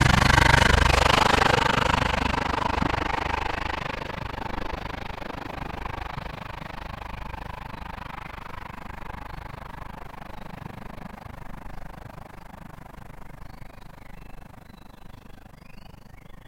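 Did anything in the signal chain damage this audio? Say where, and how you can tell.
Yes. Overlap-add ripple runs through the whole clip. A frame-based processing stage windowed the sound and rejoined the frames with an overlap that doesn't sum to constant gain, so the level dips by about 60 dB around 30 times a second, heard as a harsh flutter.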